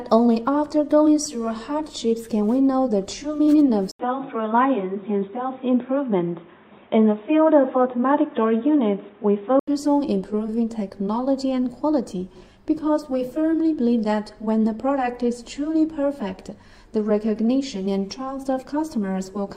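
At 3.91 s, after an 80 ms gap, the sound turns dull and gains faint background noise, with nothing above 3.8 kHz, until 9.67 s. Likely the input switched to a poorer device.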